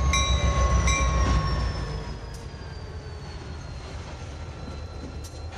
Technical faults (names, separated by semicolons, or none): none